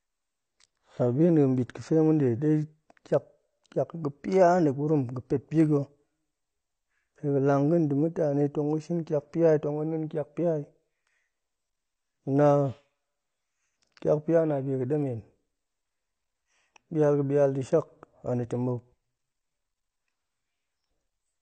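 Throughout the speech, the signal has likely been through AAC compression, and the damage fits AAC-LC at around 32 kbps. Too few bits forced a low cut-off, with nothing above 8.6 kHz, so the sound is plainly dull and smeared, with fizzy, warbling sibilants.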